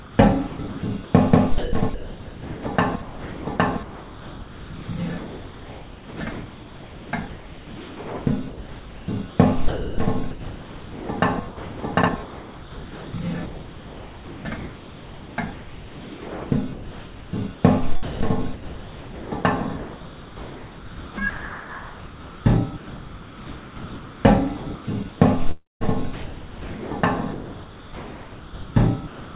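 Throughout the clip, from 0.00 to 29.34 s, the sound is choppy, with roughly 20.4 s replaced by synthetic hiss and a 4 kHz band limit that fits a G.711 call path. The likely cause is sound chopped by the voice detector, which repeatedly stopped sending and let comfort noise fill the gaps.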